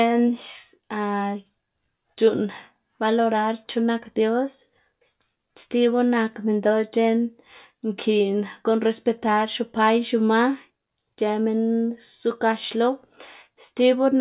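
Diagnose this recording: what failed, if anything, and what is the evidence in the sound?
Nothing in this speech recording points to a failure at any stage, so there's nothing here to diagnose.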